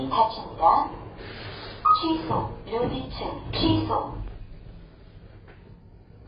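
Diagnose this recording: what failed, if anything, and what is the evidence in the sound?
Codec stage. Throughout, nothing remains above 5 kHz and the sound is smeared. Likely AAC compression, cutting the top band at a bitrate that fits about 16 kbps.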